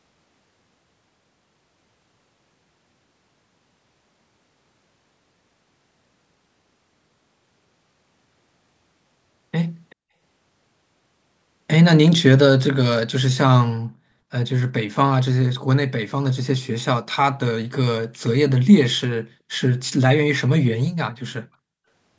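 At 9.9 to 9.95 s a brief, very faint ghost of the speech appears, trailing the original by about 0.38 s and sitting roughly 35 dB below it. This is an echo leak, likely from a far end on loudspeaker whose echo canceller let a scrap of its microphone pickup return. On a spectrogram it shows as a copy of earlier harmonics, cut off at the call band's 8 kHz ceiling. In the waveform it is a barely visible ripple.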